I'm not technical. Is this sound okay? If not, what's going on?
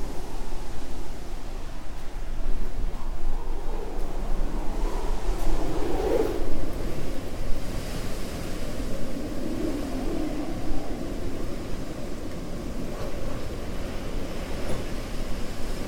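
No. Compressed frames are skipped at 2.92 s, 8.79 s and 14.92 to 14.94 s. Short blocks of the stored sound never play, so it jumps ahead by roughly a fourteenth to a fifth of a second.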